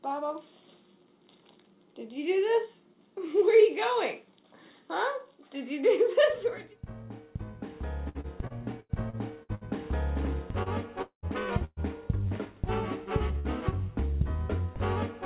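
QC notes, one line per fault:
8.09–9.64 s, repeated packet loss (robotic sound): seven separate gaps hit this stretch in quick succession, the longest about 89 ms, adding up to roughly 360 ms of lost audio. Each hole was patched by extending the sound just before it. With about a quarter of the span rebuilt this way, the sound turns choppy and mechanical, with fragments chopped out and replaced by copies of what came before.
10.63–10.69 s and 12.28–12.34 s, short concealed packet loss: each time, about 30 ms of audio failed to reach the decoder in time. The receiver bridged the hole by carrying the preceding sound forward, using its pitch if it had one or shaped noise if not, then crossfaded back into the real signal. What you hear is a momentary smear or wobble, and any very brief sound in that window can disappear.
11.02–11.26 s, long network dropout: about 210 ms of audio is missing. 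The first roughly 100 ms is filled with a continuation of the previous sound that decays into a fading buzz or hiss, and the last 100 ms or so is near-silence before the audio resumes further along. The likely cause is a stall in the incoming stream. The missing portion is never played.
11.65–11.80 s and 13.39–13.48 s, burst of packet loss: several consecutive packets failed to arrive, about 120 ms in the first case and 60 ms in the second. The receiver held the last sound and ramped it down across the gap, giving a held buzz or fading hiss, with a brief drop to silence of about 20 ms at the end of the first burst. Playback then picks up later in the signal, and the lost section is skipped. The concealment stays within the call path's G.711 band, with nothing above 4 kHz.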